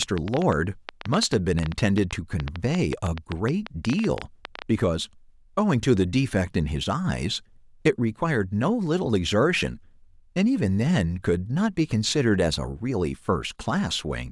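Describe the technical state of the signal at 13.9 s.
At 13.9 s the speech signal is intact, with no audible technical fault at that moment.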